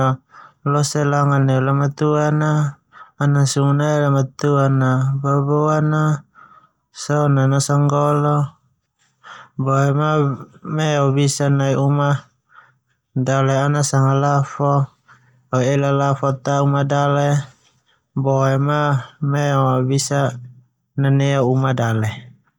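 Listening through the speech recording, nothing stood out as a technical problem.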